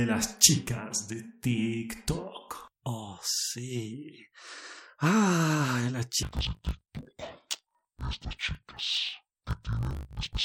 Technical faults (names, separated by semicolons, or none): interleaved audio read as planar